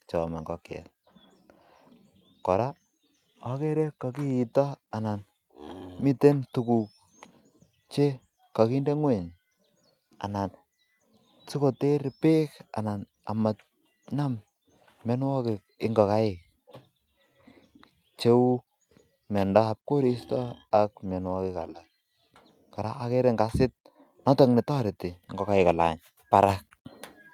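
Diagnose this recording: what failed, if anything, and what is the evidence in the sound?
The fault sits in call processing: a microphone volume step-up at 26.49 s, where the whole signal rises by about 6 dB in one instant. The call software judged the input too quiet and raised the device's capture gain in one move rather than ramping it. What separates this from a talker leaning closer to the microphone is that the room background climbs by the same amount at the same moment, so the speech-to-noise balance stays unchanged.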